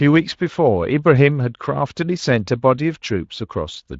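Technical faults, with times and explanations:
No technical faults turn up anywhere in this speech, and the Speex coding at around 24 kbps comes across with only a light touch of its character.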